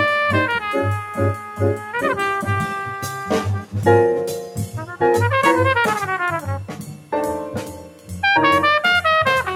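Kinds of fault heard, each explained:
Noise suppressor applied to music or sounds: A speech-tuned suppressor stays on throughout, mistaking steady tones and tails for noise and riding gain down by around 10 dB, so the level pumps. Waveforms show a breathing envelope; spectrograms show sustained bands fading while onsets stay bright.
Sound cut by the noise suppressor: At 1.0–1.6, 1.76–1.94, 6.65–7.13 and 7.57–8.16 s the suppressor clamps hardest, dropping level by about 8, 7, 10 and 10 dB. Held sound sinks and decays end early, seen as waveform dips and truncated spectrogram tails.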